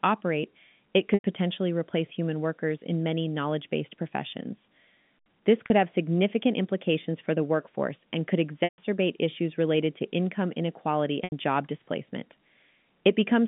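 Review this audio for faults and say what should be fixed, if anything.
Packet loss with pitch repetition occurs at 1.14–1.23 s, 5.66–5.70 s, 8.64–8.78 s and 11.24–11.32 s. Gaps of 100, 40, 140 and 80 ms are filled by repeating the last pitch period. The shortest sounds held and buzzy; longer ones fade before speech resumes. Forward error correction or redundant packets on the link would prevent it.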